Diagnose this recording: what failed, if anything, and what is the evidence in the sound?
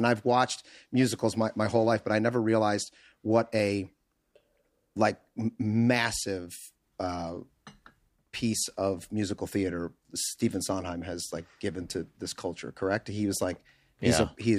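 Nothing failed in this speech recording. No stage of the chain leaves any audible evidence of a problem.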